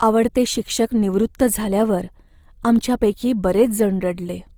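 Opus compression runs throughout, likely a music-mode encode near 24 kbps. Starved bands get filled in, so the speech sounds plainly grainy and rough up to 20.3 kHz.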